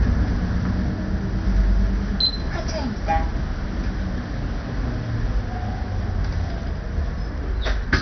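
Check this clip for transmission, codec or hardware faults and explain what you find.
One fault runs through the whole clip. It is likely MP2 compression at a starved rate near 48 kbps, which shuts off sub-bands: nothing above 6.1 kHz, and a dull, gurgling, granular texture throughout.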